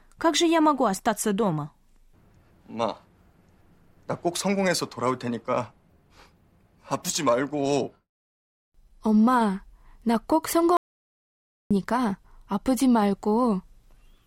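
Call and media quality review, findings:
Audio dropout to silence, 10.77–11.71 s, right after "엄마 나꼭". Speech cuts off mid-flow. About 0.94 s of silence follows, with no room tone. Likely a lost input link or device, while the recorder kept writing silence. Speech in the gap is lost.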